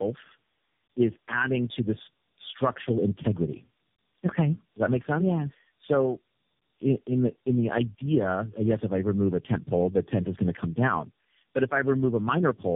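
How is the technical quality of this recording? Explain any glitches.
The technical quality is poor throughout. The speech is band-limited and degraded by repeated lossy coding.

Tandem speech coding affects the whole clip. The signal sounds as if it was decoded and re-encoded at several network borders, which fits roughly four speech codecs in series, including low-rate AMR-NB. Each stage codes the artefacts left by the one before, so the errors accumulate. The result is rough, muffled, warbly speech with nothing above 3.7 kHz.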